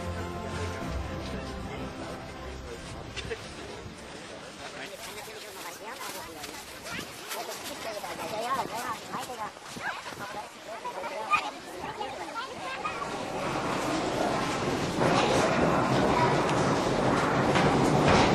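From 4.86 s to the end, the audio plays as a section at the wrong speed: about 1.44 times too fast, so everything rises roughly seven semitones and hurries. Speed and pitch shift together at that point, likely from the section being played against the wrong clock.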